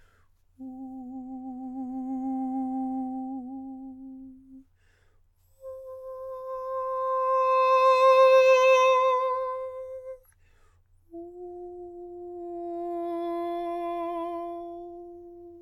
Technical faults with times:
6.18-7.27 repeated stalls (stutter)

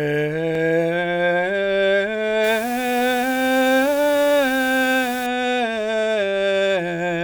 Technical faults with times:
2.44-5.26 low bit depth with dither

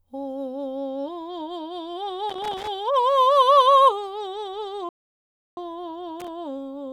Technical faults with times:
2.30-2.68 loose connector crackle
4.89-5.57 playback stall
6.20-6.28 loose connector crackle

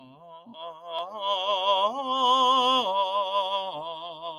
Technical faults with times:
0.00-4.39 noise suppressor applied to music or sounds
0.00-0.94 sound cut by the noise suppressor
3.76-4.39 sound cut by the noise suppressor

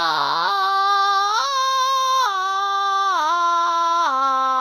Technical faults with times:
0.00-4.61 low-bitrate audio saved at a high bitrate

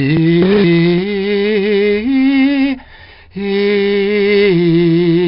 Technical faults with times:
0.00-5.28 4-bit ADPCM compression

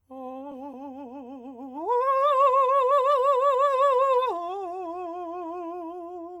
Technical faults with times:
0.51-0.53 skip ahead
2.46-3.28 jitter buffer speed-up

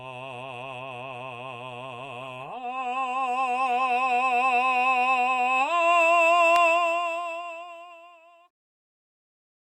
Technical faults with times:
2.20-4.20 adaptive stream at a lower bitrate

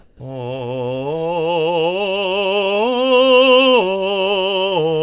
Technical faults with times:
0.00-0.20 comfort noise in place of the background
0.17-0.20 onset clipped by the voice detector

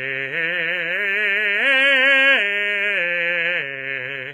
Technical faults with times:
0.00-4.33 HE-AAC compression

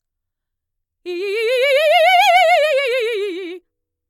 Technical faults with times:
none

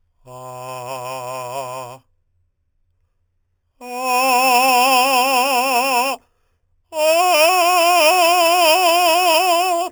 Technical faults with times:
0.00-9.91 imaging from sample-and-hold upsampling

